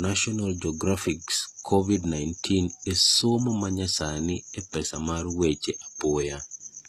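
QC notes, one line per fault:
Throughout, HE-AAC compression: s sounds come out gritty and lispy, nothing above 14.9 kHz, likely treble copied up by band replication at a low bitrate.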